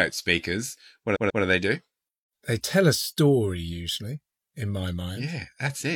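A short run of compressed frames in this speech clip was written or sent more than once, so the decoder played the same stretch of audio again: repeated frames. From 1.12 to 1.40 s, a block about 139 ms long, consistent with roughly three frames, is heard three times in a row, two extra plays. The sound stutters as that fragment loops, and the clip runs about 279 ms longer than it should.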